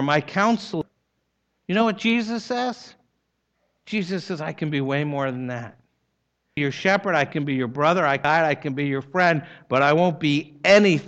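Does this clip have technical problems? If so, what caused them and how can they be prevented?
Yes. Damaged data in a compressed stream, at 0.82 s, 6.57 s and 8.25 s: bytes in the encoded speech were lost, zeroed or overwritten, so the decoder misread the affected frames, lost sync and hunted for the next valid frame header. Each event is heard as a brief chirp, squawk, click or short hole cutting into the speech. Checksummed storage and transfer, with error detection at the container level, would prevent this corruption.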